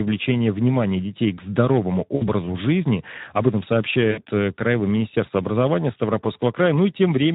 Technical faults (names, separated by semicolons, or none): Speex codec; VoIP packet loss concealed by the speech codec